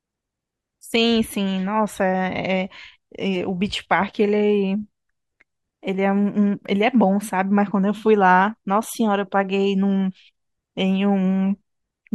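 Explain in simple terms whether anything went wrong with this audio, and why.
At 4.74 s there is a tiny blip from damaged data in a compressed stream. The player hit corrupted bytes, lost its place, then resynced.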